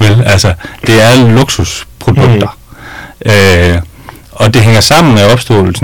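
Speech with hard clipping throughout: overdriven by about 25 dB, roughly a fifth of its samples are cut flat, giving harsh fuzz on every loud sound rather than soft saturation's rounder grit.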